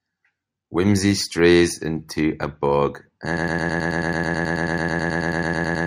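A broken-record loop takes over at 3.37 s and runs until the clip ends: a 108 ms fragment of the speech repeats exactly, back to back, about 23 times, giving a rapid mechanical stutter with no forward progress. The likely cause is a player, encoder or stream that stalled and kept resending the last piece it held. Whatever speech belonged in those final seconds is lost, replaced entirely by the repeating fragment.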